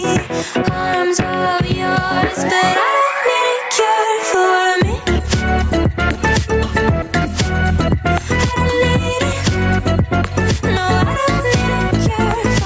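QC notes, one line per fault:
Throughout, gain pumping: the gain swings by around 10 dB, so loud and quiet bits sit squashed close together. Likely cause is the mic gain set way too hot, with a fast limiter or compressor yanking it down on every peak and letting it creep back up between them. The call mic processing's bass roll-off and top end stopping near 8 kHz are normal here.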